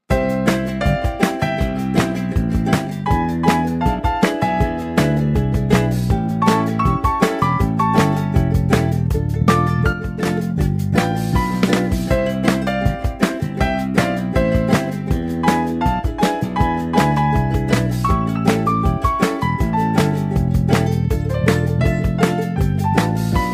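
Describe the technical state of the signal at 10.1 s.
At 10.1 s one stereo channel has likely dropped out, from 9.93 to 10.26 s. In the mono sum, sound shared by both channels falls abruptly by about 6 dB and anything carried only by the lost channel vanishes, then both return.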